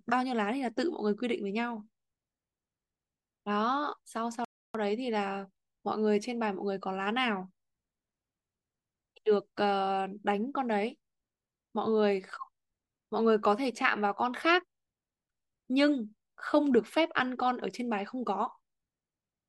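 At 4.45 s the speech cuts out abruptly and the output stays silent until 4.75 s, a gap of about 0.30 s, before the sound resumes. This is a playback stall. The likely cause is the player running short of buffered data, or its audio thread being held up, so nothing reached the output until it recovered. It is heard as a clean hole dropped into otherwise continuous speech.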